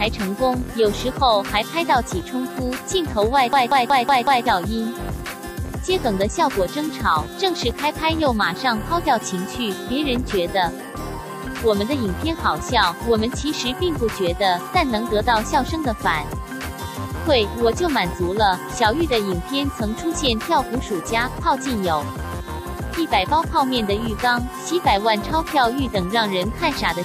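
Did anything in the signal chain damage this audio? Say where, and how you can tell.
Yes. At the driver or buffer stage, a system hang loop runs from 3.53 to 4.46 s. The machine stalled while the hardware kept replaying one buffer, roughly 186 ms long, which fits an 8192-sample buffer, five times at 5.38 Hz. That gives a machine-gun stutter, and about a second of audio is lost.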